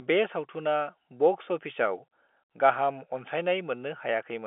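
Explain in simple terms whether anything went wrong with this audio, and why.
Nothing went wrong: the speech has simply passed through ordinary G.711 telephone coding, which carries nothing above about 3.7 kHz, and no faults occur anywhere in the recording.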